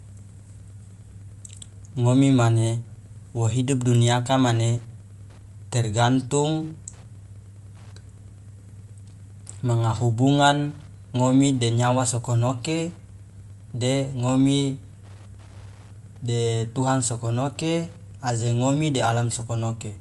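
Wi-Fi interference runs throughout: a nearby radio's beacon, rectified by the audio circuit, ticks faintly every 102.4 ms, roughly ten times a second, well beneath the speech. Bluetooth LC3 compression, also throughout, is the likely cause of the plainly grainy, breathy upper band, where noise replaces discarded detail, consistent with about 48 kbps and 7.5 ms frames.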